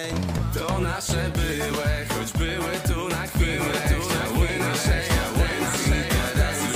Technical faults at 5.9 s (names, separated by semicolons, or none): doubled audio track